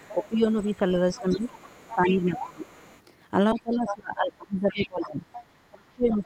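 Other side's voice leaking through, 0.02 to 0.6 s: a faint second voice sits about 25 dB under the speech, likely loudspeaker echo the echo canceller failed to remove from the microphone. Speech suppressed in double talk, 0.11 to 2.7 s: the talker's voice dips by up to about 15 dB across roughly a second and a half, likely because the canceller, facing both sides at once, turned everything down. The leaking voice returns from 1.17 to 3.0 s, louder at about 15 dB below the speech. Speech suppressed in double talk again from 3.54 s to the end, with the talker's level falling by up to about 25 dB over roughly two seconds, likely the same overlap confusing the canceller. Within it, the other side's voice leaks through from 3.58 to 3.95 s at only about 10 dB under the speech, then from 4.71 to 5.43 s at about 15 dB below.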